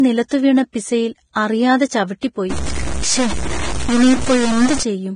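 Throughout the speech there is heavy hiss and graininess, with roughened tones, blurred attacks and nothing above 9.7 kHz. This is the sound of Vorbis compression at a low rate, which fits roughly 23 kbps. The codec lowered its cut-off and quantised the remaining treble so coarsely that fine detail turned to noise.

Pre-echo appears three times as a short hiss ahead of a sharp onset, leaving the attack smeared. At 0.73 s it lasts 18 ms and comes just before "പിസയിൽ അറിയാതെ". From 1.33 to 1.36 s (32 ms) it follows "നിലത്തുവീണ പിസയിൽ", and from 2.20 to 2.23 s (29 ms) it follows "നിലത്തുവീണ പിസയിൽ അറിയാതെ". Each time, the transform block spread quantisation noise sized for the loud attack back into the quiet moment before it.

From 2.50 to 4.83 s, distortion noise rides on the signal and also fills the pauses. The likely cause is a stuck bit: one data bit held at a fixed value throws about half the samples off by that bit's weight, and it flips around small values near silence.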